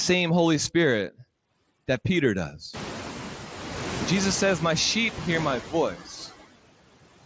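From start to finish there are noise suppressor artifacts. The suppressor pulls down whatever it judges to be steady background by about 16 dB, frame by frame, so the noise dips in the gaps and comes back up underneath the speech. That pumping is easier to hear once the room noise jumps by about 24 dB at roughly two and a half seconds, after which it sits only about 11 dB below the talker.

At 5.94 to 6.12 s, right after "sheep hear my", there's speech cut by the noise suppressor. It mistook part of the speech for background and turned it down with the noise, by about 13 dB at the deepest point, across roughly 150 ms in total. That stretch comes across as swallowed, as if the talker dropped away for a moment. Through all of this the audio stops at 8 kHz, as the Bluetooth mSBC link and call processing would leave it, with only light codec graininess.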